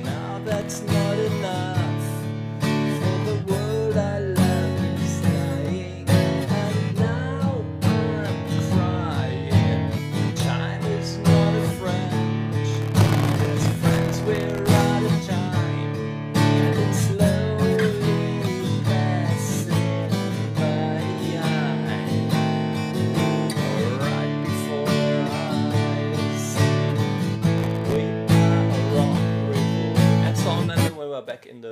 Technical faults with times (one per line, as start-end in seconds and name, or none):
0.47-0.82 processor overload crackle
12.72-14.83 processor overload crackle
27.58-27.96 processor overload crackle